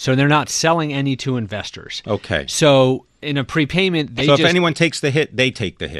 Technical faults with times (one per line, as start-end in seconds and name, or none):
0.00-6.00 MP2 compression
4.17-4.21 DAB burbling